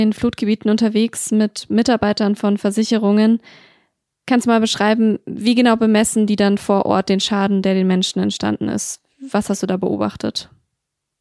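No technical faults are audible.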